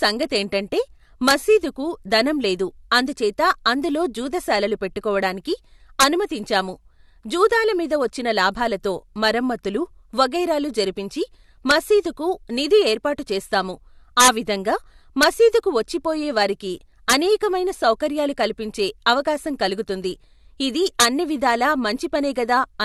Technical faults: integer overflow

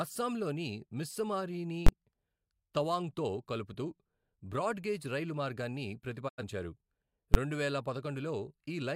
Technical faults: invalid numbers at full scale; digital broadcast dropout

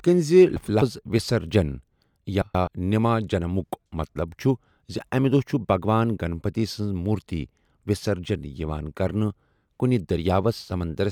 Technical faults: frames out of order

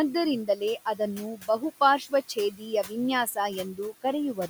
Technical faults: noise suppressor artifacts; speech cut by the noise suppressor

